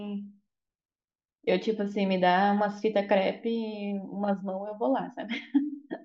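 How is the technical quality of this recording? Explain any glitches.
Nothing stood out on listening to this recording, and there are no glitches to explain.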